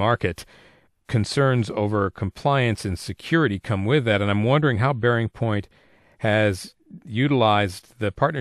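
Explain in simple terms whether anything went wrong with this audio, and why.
Nothing went wrong here; no faults can be heard.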